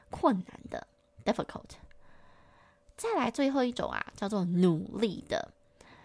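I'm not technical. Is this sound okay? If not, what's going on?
Yes, nothing wrong is audible in this speech recording, so there is nothing to fix.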